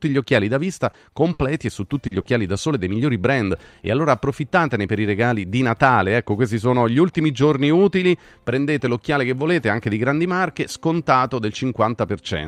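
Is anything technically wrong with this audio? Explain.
Yes. Repeated packet loss (robotic sound), 0.35 to 2.27 s: four dropouts, the longest 60 ms, each patched by extending the preceding sound, leaving choppy speech.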